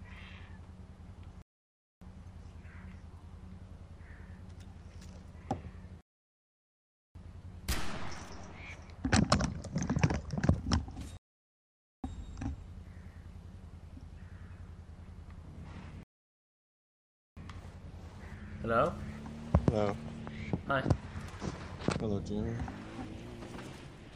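At 1.42, 6.01, 11.17 and 16.03 s there's a rebuffering stall: the player runs dry, drops to silence for 0.60, 1.14, 0.87 and 1.34 s respectively, then picks up exactly where it left off. Nothing's missing, it just adds time.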